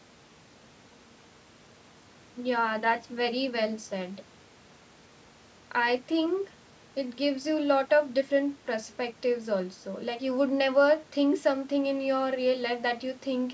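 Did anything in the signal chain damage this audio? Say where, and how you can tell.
No, nothing in the signal chain has damaged this speech. It has clearly passed through a call's microphone processing, which leaves nothing above 8 kHz and trims the lowest bass, as expected for that stage.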